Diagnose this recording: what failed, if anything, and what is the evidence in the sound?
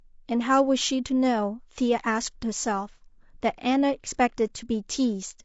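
The speech sounds rough and grainy throughout, with noise between harmonics. This is a codec-stage fault, likely low-delay AAC compression, whose low bitrate of 32 kbps leaves too few bits for the harmonics.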